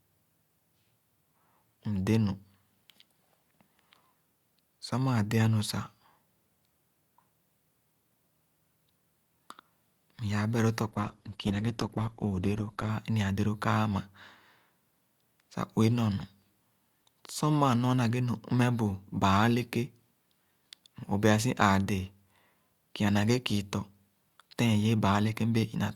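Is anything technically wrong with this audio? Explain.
Yes. From 10.89 to 12.89 s the speech drops to an adaptive stream at a lower bitrate: the player switched down, likely because the connection slowed, to a version that sounds like about 16 kbit/s Opus. Treble vanishes above 12.1 kHz and codec artefacts thicken, changing abruptly without any gap.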